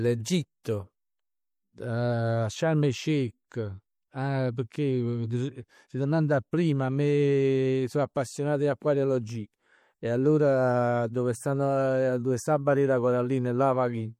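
Right from the start the speech has plainly audible MP3 compression: a watery, swirly quality where faint detail flickers in and out between frames, and s sounds turning metallic. That degree of damage fits a low rate around 64 kbps. The top end still reaches about 20.5 kHz.

At 0.64 s there's a pre-echo. The codec smeared its noise across the block, so a brief hiss, roughly 15 ms long, arrives just before a sharp attack and leaves that onset sounding soft instead of crisp.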